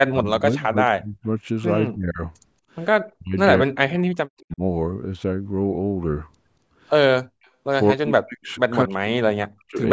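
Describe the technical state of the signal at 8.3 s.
At 8.3 s the speech collapses, from 7.92 to 8.53 s, likely speech suppressed in double talk: the echo canceller ducks it by roughly 40 dB, leaving a near-empty waveform gap and faded spectrogram energy.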